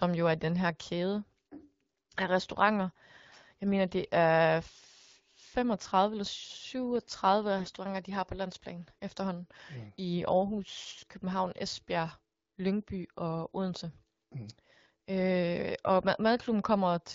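From 7.58 to 7.76 s the speech turns hoarse, scratchy and gargly while roughly keeping its pitch and level. These are AMR bit errors in the 12.65 kbit/s AMR-WB stream. Around one in seven weakly protected bits arrived flipped across what fits nine 20 ms frames, misplacing excitation pulses and skewing fine pitch, gain and spectral values.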